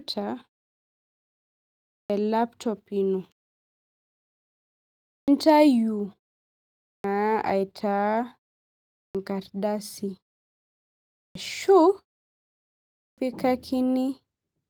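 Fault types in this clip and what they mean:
Clipped start after a pause: the output path goes idle during silence and needs about 150 ms to wake, so speech resuming at 1.95, 5.13, 6.89, 8.99, 11.21 and 13.01 s loses its onset, as just before "laptop ino", and starts abruptly.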